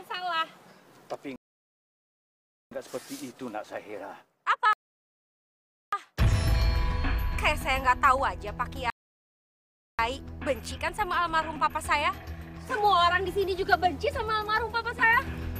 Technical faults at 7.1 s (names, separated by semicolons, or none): none